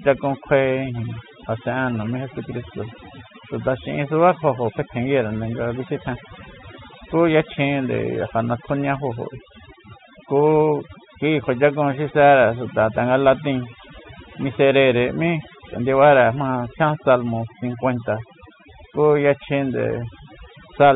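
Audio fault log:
Throughout: overdone noise removal. The background drops and breaks up into twinkling specks. A noise reduction stage was pushed too hard. Any frequency band close to its noise estimate gets cut deeply or switched off. Quiet parts of the voice fall near that threshold, so they vanish along with the background noise. The surviving specks are isolated bands flickering on and off. The narrow telephone band of the G.711 coding is audible underneath.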